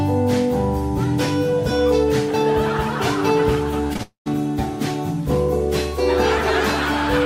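Short concealed packet loss occurs three times, at 3.87, 3.93 and 3.97 s: each time about 20 ms of audio failed to reach the decoder, and the receiver bridged the hole by extending the preceding sound before blending back, leaving a brief smear in the audio. A long network dropout follows at 4.03 to 4.28 s, likely a stretch of about 240 ms in which nothing arrived. The last sound is carried on and fades, then about 120 ms of silence, before the audio resumes with that portion gone.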